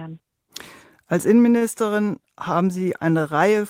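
Speech, with a short stall from a late packet at 1.57–1.63 s: the jitter buffer ran empty, so about 38 ms of held sound bridges the gap, adding 38 ms delay.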